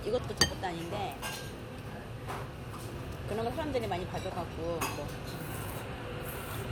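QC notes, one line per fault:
Nothing to flag here; the sound comes through without any problems worth noting.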